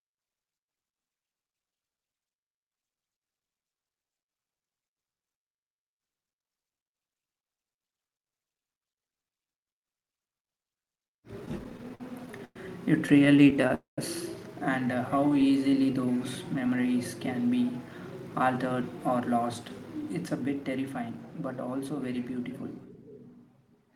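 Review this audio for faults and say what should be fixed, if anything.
Repeated stalls (stutter) occur at 11.40–12.56 s, 13.06–13.70 s and 15.18–15.50 s, the last just after "and uh". Packets arrived late, so the buffer kept running dry. The receiver stretched the last sound to fill each gap, up to 107 ms. Fix the network jitter or raise the buffer's target delay.

A call audio freeze sits at 13.74–13.99 s. The sound continues briefly, then drops to silence for 150 ms. Packets were likely held up in transit. Playback resumes where it stopped, adding about 0.23 s of delay. Find and remove the transit hold-ups.

A jitter buffer slow-down runs from 15.21 to 16.94 s, right after "and uh". Speech plays at 90% speed without a pitch change. The receiver repeated single pitch periods to rebuild its reserve, adding 185 ms. Steadier packet delivery would prevent this.

A jitter buffer speed-up runs from 18.56 to 23.19 s. 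Speech plays at 110% speed and sounds hurried. The buffer held too much audio, so short pitch-period pieces were cut, roughly half a second in total. Avoid bunched packet arrivals so the buffer needn't shed backlog.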